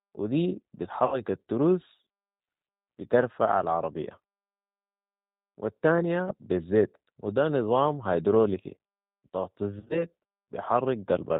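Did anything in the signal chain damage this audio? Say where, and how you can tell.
Yes. At the codec stage, G.729 at 8 kbit/s rebuilds the speech from a filter and sparse pulses, sounding rough and synthetic; a spectrogram shows a hard ceiling at 4 kHz.

At the network stage, VoIP packet loss concealed by the speech codec: about 70 ms lost at 1.06–1.21 s after "و دي", 10 ms at 6.29–6.32 s before "بالزيت وده نظام", and 80 ms scattered through 9.80–10.06 s. The decoder stretches the last pitch and filter into a buzzy tone or coloured noise that fades, seen as smeared harmonics and sagging waveform envelopes.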